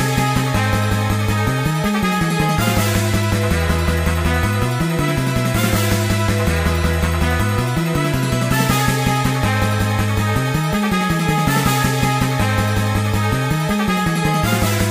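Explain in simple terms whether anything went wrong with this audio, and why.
Nothing went wrong here; no technical faults can be heard.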